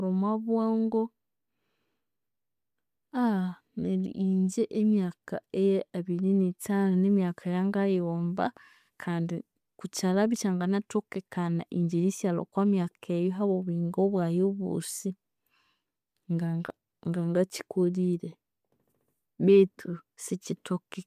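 Nothing in this speech recording stands out as a technical fault, so there's no problem to point to anywhere along the way.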